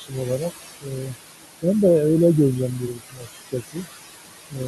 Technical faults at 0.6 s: noise suppressor artifacts; speech cut by the noise suppressor

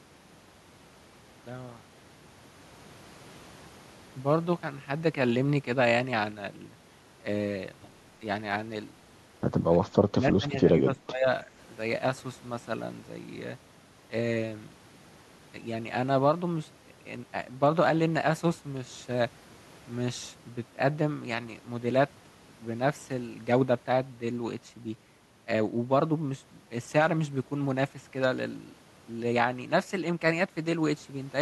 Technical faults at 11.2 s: speech suppressed in double talk

